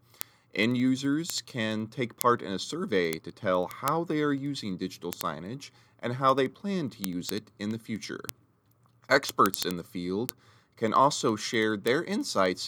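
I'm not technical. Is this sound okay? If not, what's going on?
No, there's a problem: word clock ticks, a fast steady ticking of about fourteen per second that runs under the speech from 0.13 s to 12.62 s. Two digital devices are running on separate clocks that drift apart, so a sample gets dropped or doubled with every tick.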